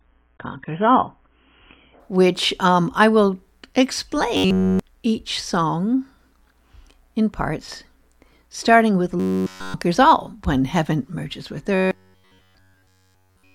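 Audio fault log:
0.00–2.00 s, adaptive stream starting at a low bitrate: the opening has nothing above 3.8 kHz and thicker codec artefacts, which fits a player starting on a roughly 16 kbit/s AAC version, then jumping cleanly to a much fuller one around 96 kbit/s.
4.37–4.83 s, 9.20–9.74 s and 11.75–13.54 s, robotic sound from repeated short buffers: the speech turns into a stiff metallic buzz at 93.8 Hz, likely because new audio kept arriving late and a 10.7 ms chunk was looped over and over in its place.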